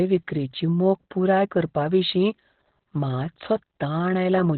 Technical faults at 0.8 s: Opus voice compression

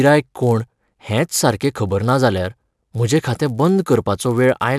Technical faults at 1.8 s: resampler restarted on every block

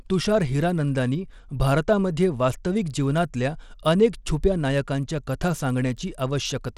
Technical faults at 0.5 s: Bluetooth SBC compression

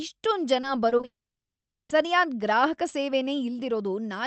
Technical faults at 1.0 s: repeated packet loss (robotic sound); long network dropout

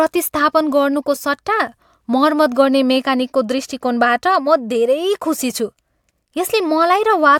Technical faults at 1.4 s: none

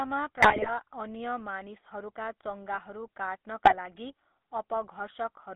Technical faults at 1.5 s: GSM full-rate codec

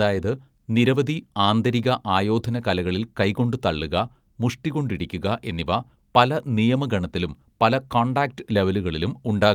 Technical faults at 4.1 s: none

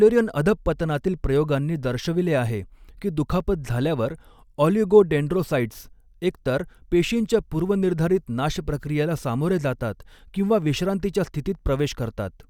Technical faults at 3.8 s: none

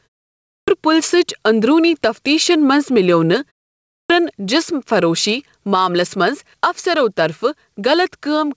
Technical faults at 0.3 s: gain pumping; clipped start after a pause

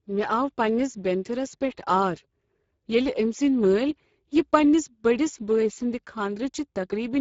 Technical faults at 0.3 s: Speex codec

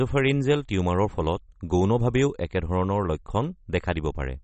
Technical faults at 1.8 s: MP3 compression

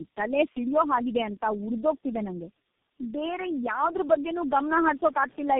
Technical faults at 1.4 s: tandem speech coding

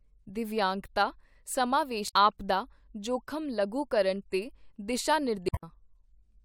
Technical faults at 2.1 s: damaged data in a compressed stream

